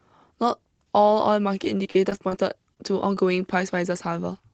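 This is a speech clip carried over a call path using the Opus codec. Its audio band stops near 8 kHz, which fits a low-bitrate setting of around 20 kbps. From 1.64 to 2.34 s, packets went missing or arrived late again and again, producing repeated packet loss (robotic sound). Seven separate gaps open within that stretch, the longest about 40 ms, and roughly 15 percent of the span is patched. Each hole is filled by extending the preceding sound before the next loss arrives, so the speech turns choppy, with fragments dropping out. Later come two isolated cases of short concealed packet loss, at 2.74 to 2.77 s and 3.15 to 3.17 s, each costing 10 to 20 ms of audio. The decoder again continues the last sound across the hole and blends back into the real signal. Each is heard as a brief smear or wobble, and a short consonant sound there can go missing.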